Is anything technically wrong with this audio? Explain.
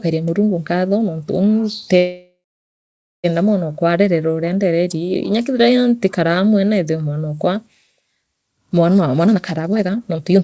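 Yes. There are two faults.

From 1.98 to 3.26 s there is a call audio freeze. The sound stops moving forward. The last moment carries on as a fading buzz, then drops into silence for about 0.86 s. This is likely packets stalling in transit, so the jitter buffer ran dry and the receiver filled the wait. When playback resumes, it picks up where it left off. Nothing is lost, but everything after arrives 1.26 s later.

From 8.96 to 10.42 s there is a jitter buffer speed-up. The audio plays at 144% speed with its pitch unchanged, so the speech sounds rushed. The buffer had built up too much delay. To catch up, the receiver cut many tiny slices, each a pitch period or so long. In total it removed around 0.7 s. Throughout, the G.722 call coding leaves nothing above 8 kHz.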